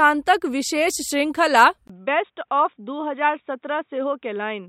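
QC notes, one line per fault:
1.88–4.69 s, input switched to a poorer device: after a 20 ms gap the speech turns dull and boxy, about 5 dB quieter, over a faint new noise floor. The likely cause is a narrower-band microphone taking over. The spectrogram shows everything above 3.8 kHz cut off, and the waveform a brief dropout then a smaller envelope.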